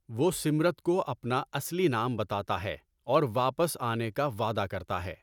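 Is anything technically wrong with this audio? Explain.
No technical faults are audible.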